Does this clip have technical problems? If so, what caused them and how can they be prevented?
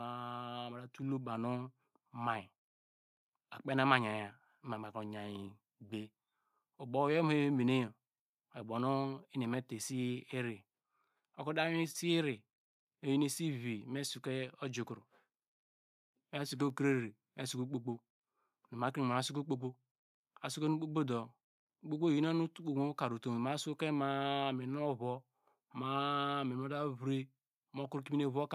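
Yes. A microphone volume stepped up fault occurs at 1.02 s, where the whole signal jumps by about 4 dB in a single instant. Automatic input control in the call software judged the microphone too quiet and raised the device's input volume in one step, so the speech and the background noise beneath it rise together rather than the voice alone. Preventing it means switching off automatic microphone level adjustment and setting a fixed, adequate input gain before recording.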